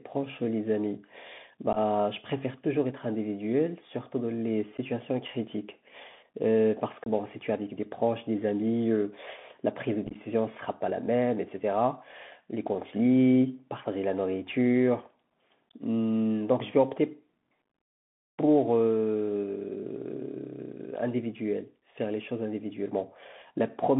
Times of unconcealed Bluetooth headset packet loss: 1.73-1.78, 4.77, 7.04-7.08, 10.07-10.16

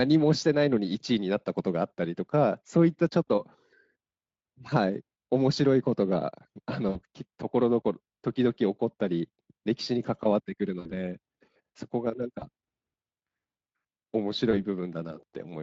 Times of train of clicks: none

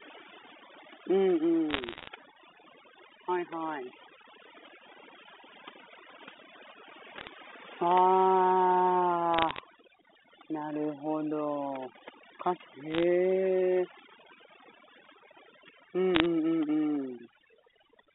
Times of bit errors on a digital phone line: 1.71-2.08, 7.18-7.28, 9.34-9.60, 12.91-13.03, 16.15-16.26

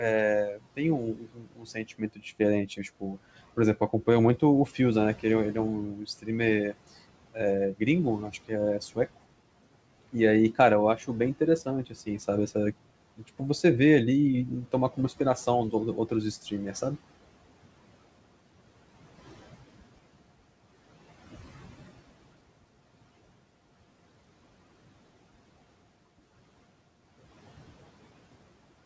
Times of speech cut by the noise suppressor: 0.01-3.19, 3.76-6.74, 7.33-8.97, 10.12-12.20, 12.82-13.41, 15.72-16.75

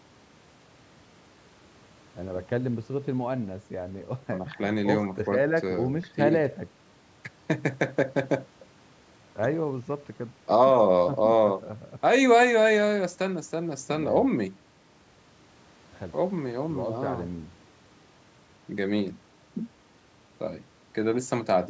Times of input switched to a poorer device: none

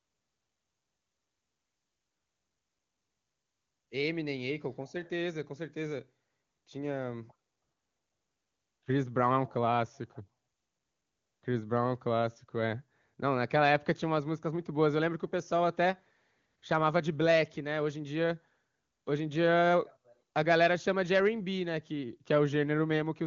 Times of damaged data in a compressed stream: none

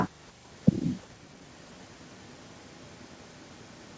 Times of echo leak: 0.22-1.07, 1.35-3.97

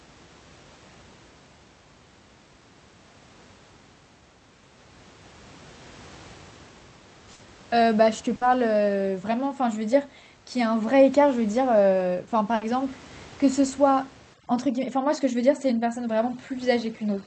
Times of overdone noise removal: 14.34-17.27

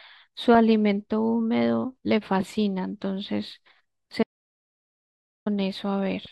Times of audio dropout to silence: 4.23-5.46

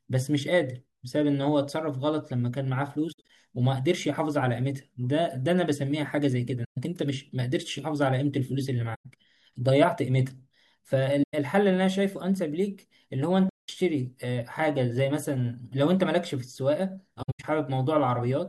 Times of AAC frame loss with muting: 3.12-3.30, 6.64-6.78, 8.94-9.06, 11.23-11.34, 13.49-13.69, 17.22-17.44

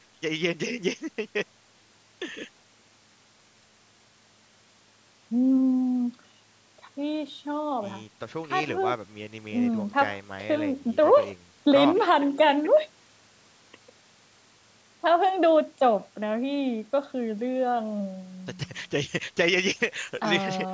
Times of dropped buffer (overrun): none

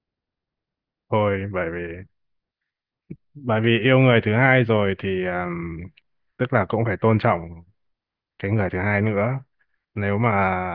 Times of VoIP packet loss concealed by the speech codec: none

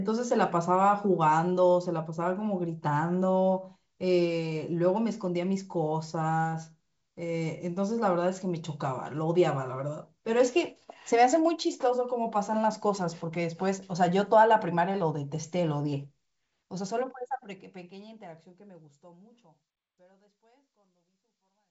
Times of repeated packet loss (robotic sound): none

